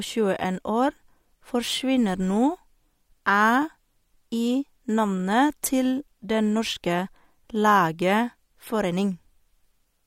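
No technical faults can be heard anywhere in it.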